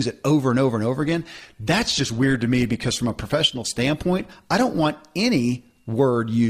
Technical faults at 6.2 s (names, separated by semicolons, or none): none